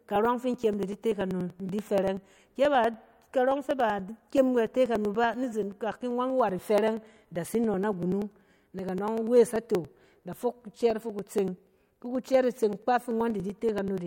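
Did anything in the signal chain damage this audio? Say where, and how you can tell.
Yes: periodic USB or driver dropouts from 0.06 to 13.98 s, at the driver and buffer stage. Every 0.096 s a few milliseconds of speech is skipped outright, giving evenly spaced ticks heard only under signal, as if a recurring task stalls the bus or audio driver.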